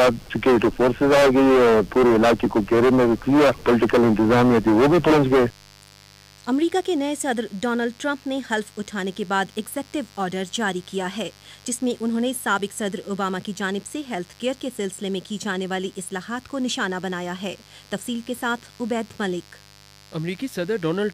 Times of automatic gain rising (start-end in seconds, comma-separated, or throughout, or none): none